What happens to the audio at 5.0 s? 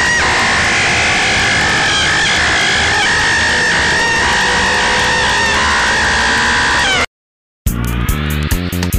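At 5.04 s the sound jumps forward: about a fifth of a second just isn't there, and the material on either side is butted straight together with no gap or fade. That's audio missing between chunks, most likely from a recorder or processor working in 2-second blocks and dropping a slice each time it closes one block and starts the next. You hear it as a sudden skip, like a tiny bit was snipped out.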